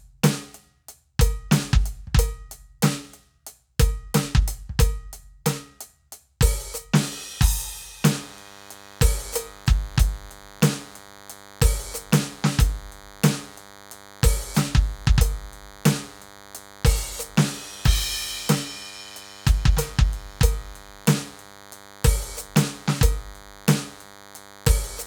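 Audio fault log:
8.14 s to the end: DECT cordless phone buzz. A thin, steady buzz comes in under the music and stays to the end, sitting roughly 25 dB below it. The 100 Hz repetition points to a DECT handset or base nearby firing a radio burst every 10 ms. The audio circuitry rectifies each burst into a sharp little pulse, and that string of pulses gives a 100 Hz tone with a big stack of harmonics, hence the raspy, wiry edge.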